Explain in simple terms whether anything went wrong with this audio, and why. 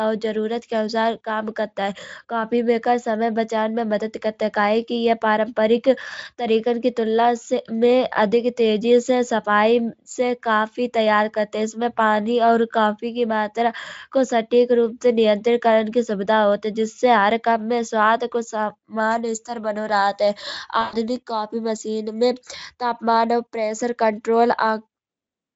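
Around 20.81 to 20.95 s, between "इस्थर बनो रहत है" and "कॉफी मशीन में तापमान", the speech codec had to conceal VoIP packet loss. Roughly 120 ms of audio never arrived, which fits a handful of consecutive lost packets. The decoder filled the gap by guessing from the last sound it received and letting it fade, so the speech briefly smears into a buzzy tone or a coloured noise that fades, and sounds weak for a moment after the audio resumes, with the Speex coding itself adding little audible damage.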